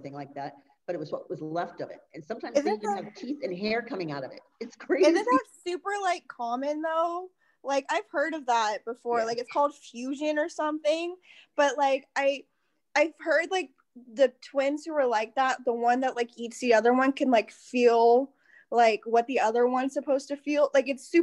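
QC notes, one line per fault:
No faults found.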